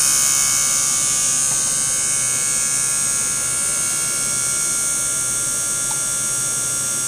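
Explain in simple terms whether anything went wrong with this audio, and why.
Nothing went wrong with this audio.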